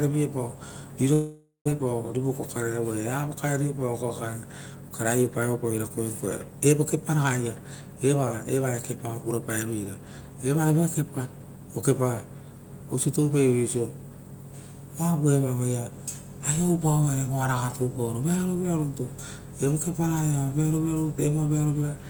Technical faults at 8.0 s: none

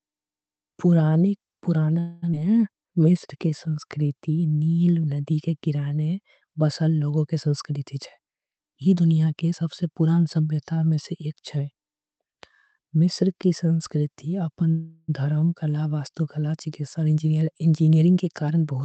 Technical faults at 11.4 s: none

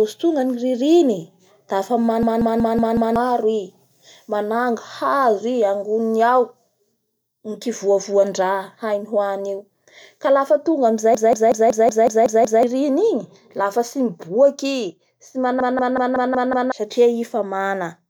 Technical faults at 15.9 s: system hang loop

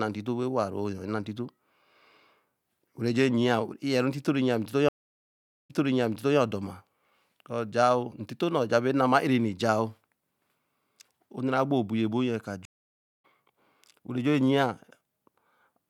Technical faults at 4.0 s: none

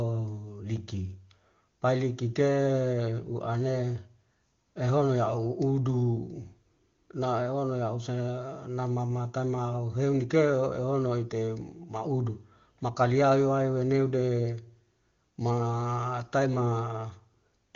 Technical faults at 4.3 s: none

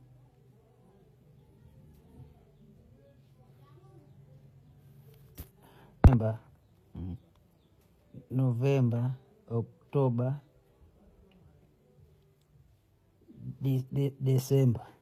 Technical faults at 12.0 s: HE-AAC compression

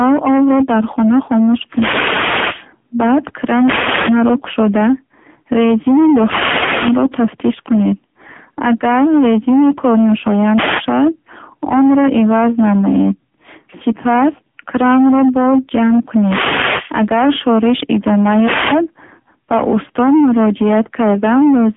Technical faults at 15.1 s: hard clipping; AMR narrowband mobile codec

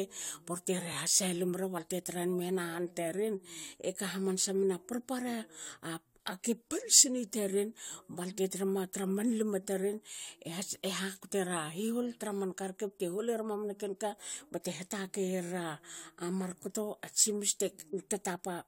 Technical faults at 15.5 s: repeated frames

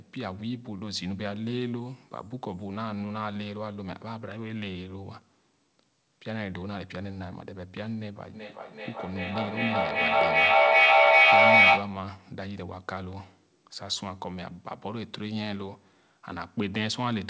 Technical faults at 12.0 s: feedback echo between two devices

